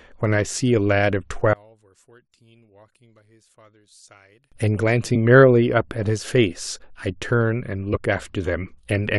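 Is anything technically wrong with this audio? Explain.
Yes, two things. From 1.53 to 4.52 s the speech suddenly sinks by about 30 dB and turns faint, as if the centre fell out. That pattern points to one channel inverted: with one side's polarity likely flipped, the shared content cancels when summed to mono.

Then there are compressed frames skipped at 5.14 to 5.17 s, at 6.93 s, and at 7.93 to 8.00 s. The audio jumps ahead by roughly 20, 20 and 50 ms.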